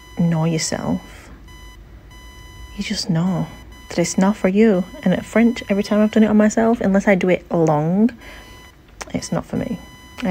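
From start to finish there's computer activity noise, a thin buzzy chirp around 1 kHz, well below the sound, from the machine's load changes leaking into the audio ground.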